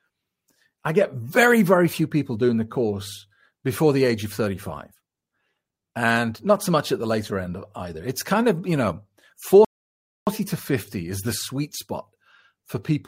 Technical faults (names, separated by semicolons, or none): rebuffering stall